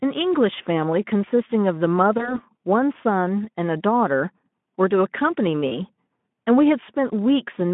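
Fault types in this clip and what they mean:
VoIP packet loss concealed by the speech codec: lost audio of 20 ms at 2.17 s and 40 ms at 5.67 s was bridged by repeating the last pitch and filter at falling gain, a buzzy or noisy smear. Spectrograms show frozen, fading harmonics, and waveforms a shrinking envelope until 2.40 s and 5.79 s.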